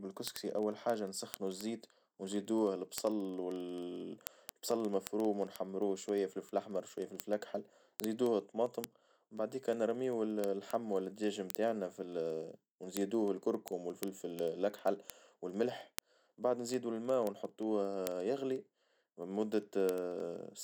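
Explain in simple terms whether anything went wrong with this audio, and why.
Something did go wrong: the speech carries word clock ticks, a stream of sharp ticks of uneven strength from about 0.14 s to 20.60 s. They come roughly every 0.04 s, around 25 a second, giving hundreds over the clip. The recording device ran on its own clock instead of following the sender's, and the two drifted apart by a rough 500 parts per million. Each slip dropped or repeated a sample. Unlike random clicks, these ticks keep a steady beat.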